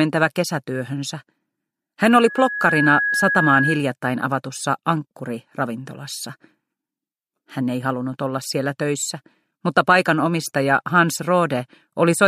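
A loudspeaker feedback squeal runs from 2.06 to 3.85 s, a single 1.7 kHz tone that swells over roughly the first 0.7 s and ends up about 5 dB above the rest of the audio. The microphone is hearing its own loudspeaker, and at that one frequency the loop gain has passed unity, so the tone keeps feeding itself. A spectrogram shows one bright horizontal line at 1.7 kHz, and the waveform's envelope grows steadily through the onset.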